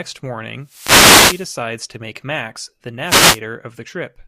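A wireless microphone noise hit runs from 0.60 to 1.60 s, and a shorter one from 3.04 to 3.40 s. Both times the radio link from the FM transmitter fades as reflected signals cancel the direct path, so the receiver's own noise comes up. Each is heard as a swish of static over the speech, the first lasting a full second and the second about a third of that.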